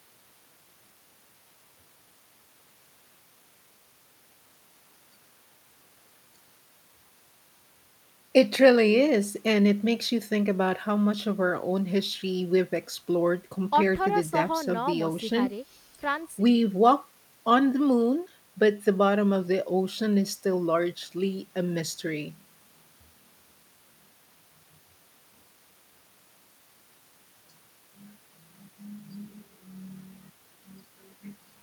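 Speech recording; no technical faults can be heard.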